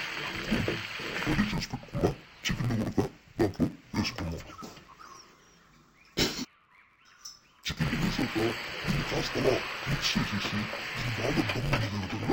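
Throughout, the sound is dull and robotic with a buzz at about 92 Hz, typical of interleaved audio read as planar in short 10.88 ms blocks.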